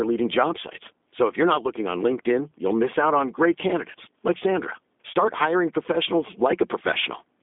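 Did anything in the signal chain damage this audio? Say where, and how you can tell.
Yes. G.729 codec damage runs throughout: nothing above 3.7 kHz, a 250 Hz to 3.6 kHz telephone band, and rough, synthetic speech from 8 kbit/s pulse-excited frame resynthesis.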